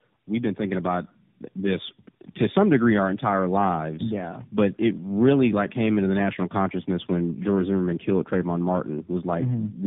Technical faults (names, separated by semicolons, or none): tandem speech coding